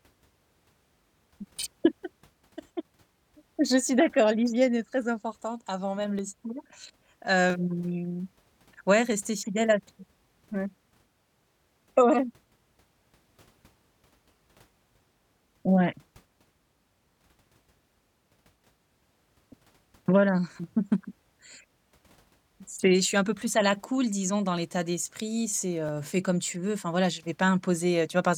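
From 0.93 s to 27.20 s a click recurs every 1.31 s, likely clock drift buffer slips, where mismatched clocks force a few samples to drop or repeat.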